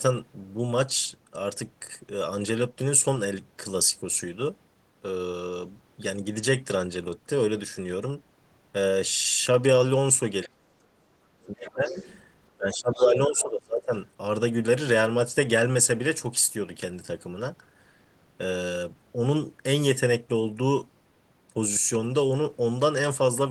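From 10.45 to 11.9 s the voice sinks, at worst by roughly 35 dB, across about a second. This is speech suppressed in double talk, likely the echo canceller turning the talker down with the echo it could not separate. Around the end of that stretch, at 11.67 to 11.71 s and again at 11.88 to 12.2 s, scraps of a second voice come through, around 15 to 20 dB below the talker. This is the other side's voice leaking through, likely loudspeaker playback that the echo canceller failed to remove from the microphone. The suppression returns from 12.58 to 13.95 s, about 25 dB deep over roughly a second and a half. During it, from 12.73 to 13.18 s, the leaked voice rises to nearly the talker's own level.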